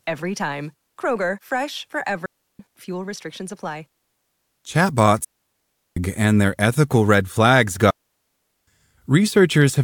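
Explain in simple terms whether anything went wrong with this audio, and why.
The speech cuts out three times, dropping into near silence with no crackle or hiss around the gaps: from 2.26 to 2.59 s (about a third of a second), from 5.24 to 5.97 s, and from 7.91 to 8.67 s (each roughly three-quarters of a second). This is a digital wireless dropout. The radio link lost too much data, so the receiver muted quickly and then came back, leaving clean holes.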